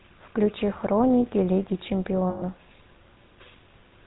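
From the start, the speech carries the damage of the GSM full-rate codec, plainly audible as a buzzy, gravelly roughness. The codec rebuilds the voice from a vocal-tract filter excited by a sparse, regularly spaced pulse train, discarding most of the fine excitation detail. The result fits a 13 kbps GSM stream. On a spectrogram, energy stops sharply at 4 kHz, and harmonics look smeared and grainy rather than clean.

At 2.30 s the signal suffers lost GSM frames, lasting 0.14 s until 2.44 s, about 120 ms, which fits six missing 20 ms frames. The decoder kept repeating the last good frame's parameters, so the sound hangs on as a rough, metallic ring instead of moving on. The waveform shows a repetitive stretch, and the spectrogram shows frozen horizontal bands before normal speech resumes.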